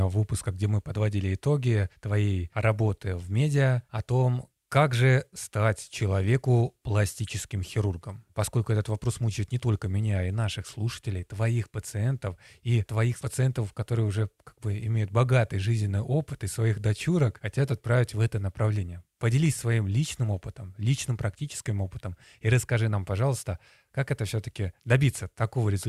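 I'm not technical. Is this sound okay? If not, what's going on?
Yes, nothing wrong can be heard in this recording.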